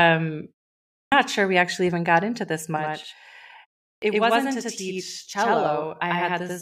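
Clipped start after a pause at 0.99 s: after about half a second of silence, the output device needed time to wake, so roughly 130 ms was swallowed and "not sure we actually" begins abruptly. Channel delay (doubling) from 2.77 s to the end, just after "even got into this": one channel runs about 93 ms late, which fits a 4096-sample buffer, and when summed to mono it sounds like an equal-level slap echo. Clipped start after a pause again at 3.88 s: following a 0.31 s gap, about 140 ms of the onset is lost.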